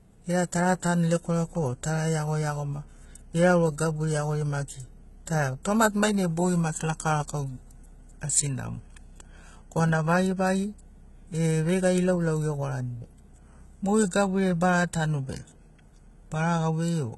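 Throughout the speech, the treble sounds bright but synthetic, with s sounds gritty and lispy and a metallic sheen over the upper range, heavy damage that points to HE-AAC compression at a very low bitrate, likely around 16 kbps. The upper band is rebuilt from copied lower bands, so its harmonics no longer align with those below. On a spectrogram, energy stops sharply at 11.8 kHz, and the high band shows repeated, smeared copies of lower patterns.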